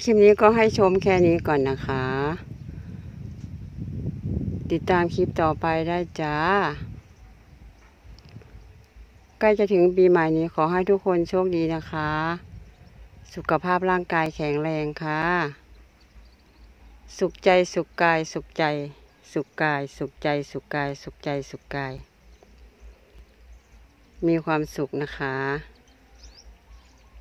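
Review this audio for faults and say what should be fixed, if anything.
Block of digital silence at 14.26, 15.22, 21.98 and 23.19 s. The sound drops abruptly to silence for about 4 ms in the first case and about 6 ms in the others, so each hole is a short tick. The repeated 6 ms length fits a 256-sample output buffer the program didn't fill in time. Enlarging the audio buffer or lightening the processing load in that callback should stop these underruns.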